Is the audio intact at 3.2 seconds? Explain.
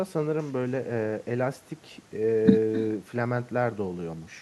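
No. At 3.2 seconds, as throughout the speech, there is echo with no canceller: the far end's loudspeaker feeds its microphone and nothing removes it, so each phrase returns around 300 ms later, about 14 dB quieter, as a thin shadow.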